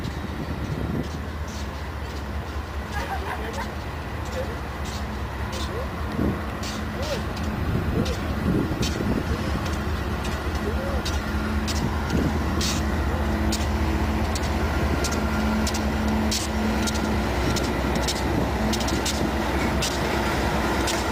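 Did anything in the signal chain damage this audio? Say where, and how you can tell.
Yes. Call bitrate drop, 7.52 to 11.59 s: the codec stage turns rough and muffled, as top end vanishes, which fits a fall from 64 to 17 kbps.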